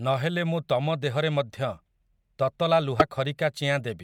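At 2.97 s, for about 50 ms until 3.02 s, the speech is broken by damaged data in the compressed stream. Corrupted bytes leave the decoder misreading frames and losing sync until it finds the next frame header, producing a brief glitch.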